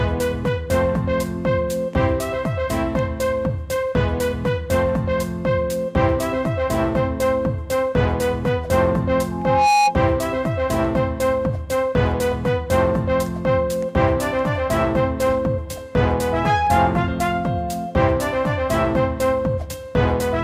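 Loudspeaker feedback squeal rises out of the audio twice, from 9.31 to 9.97 s and from 16.04 to 17.00 s. Each time a pure tone at 828 Hz swells, over just under half a second and then closer to three quarters of a second, to about 5 dB above the surrounding sound. The microphone is hearing its own loudspeaker, and at 828 Hz the loop gain passes one. A spectrogram shows a bright horizontal line at that frequency, and the waveform shows a growing sinusoidal envelope.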